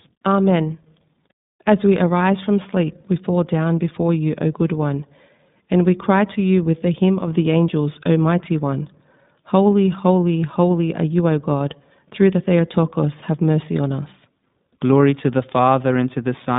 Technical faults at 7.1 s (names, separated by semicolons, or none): iLBC codec; loudspeaker feedback squeal